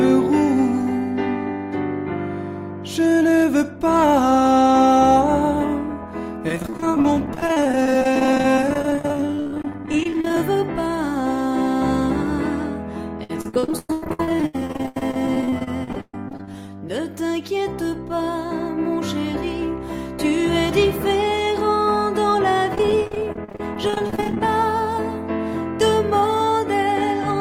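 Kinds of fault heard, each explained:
Repeated packet loss (robotic sound): dozens of short dropouts at 6.5–10.4 s, 13.2–16.9 s and 22.7–24.4 s, each patched by repeating the preceding sound, so roughly a third of each stretch turns choppy. The spectrogram shows smeared, repeated frame blocks; the waveform shows stuttering segments.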